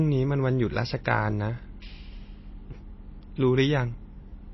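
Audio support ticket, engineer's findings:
Likely MP3 compression at a starved bitrate, throughout the speech. Encoder ran short of bits, so it cut the treble and zeroed weak frequency lines that switch on and off frame to frame. Symptom: nothing above 5.8 kHz, dull top end; watery, swirly texture plainly audible across the clip. The damage points to a low bitrate, around 24 kbps.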